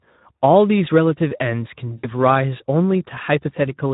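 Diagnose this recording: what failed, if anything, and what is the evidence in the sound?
The codec stage is at fault: Speex coding is plainly audible across the whole clip. The speech has the noisy, hoarse texture of a CELP coder short on excitation bits, a degree of damage that fits a setting around 11 kbps.

At 1.98 to 2.07 s the network dropped about 60 ms of audio, which fits three 20 ms packets. The decoder filled the gap by concealing the packet loss, extending the last pitch and filter at falling gain, so the speech smears into a fading buzzy tone or coloured noise before recovering.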